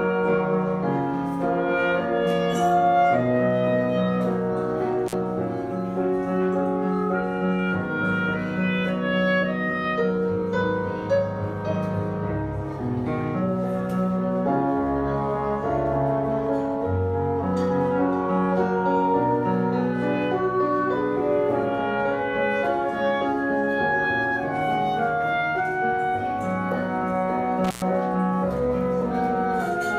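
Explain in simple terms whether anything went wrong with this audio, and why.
Something did go wrong: an intermittent contact, like a loose plug, briefly breaks the connection twice, at 5.06 to 5.14 s (open for 47 ms) and 27.64 to 27.82 s (113 ms). Unlike a clean digital dropout, each break crackles at its edges as the contact scrapes.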